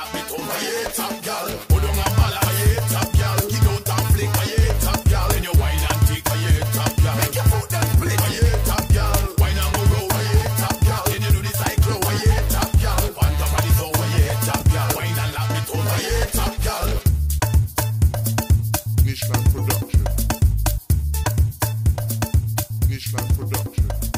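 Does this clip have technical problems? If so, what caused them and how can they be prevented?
No, no technical faults are audible.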